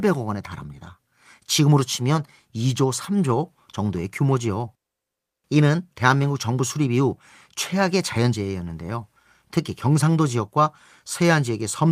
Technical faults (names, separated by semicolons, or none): none